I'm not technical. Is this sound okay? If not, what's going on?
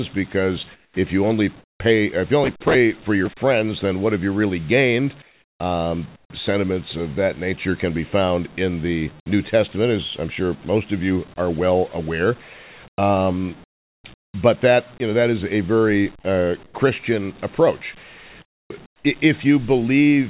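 No. In the pauses at about 0.74, 1.6, 5.22, 6.16, 12.88, 13.64 and 18.42 seconds, the real room sound drops away into a flat hiss, quieter in the first five of those pauses. This is comfort noise in place of the background, likely because the call stopped sending sound during silences and the receiving end filled each gap with made-up noise.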